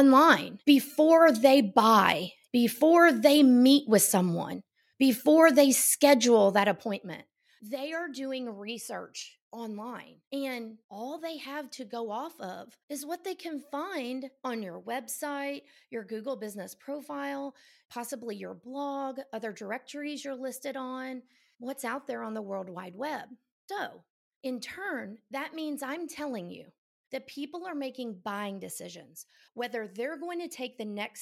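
No technical faults can be heard in the speech recording, which keeps an intact signal with no dropouts, distortion or interruptions.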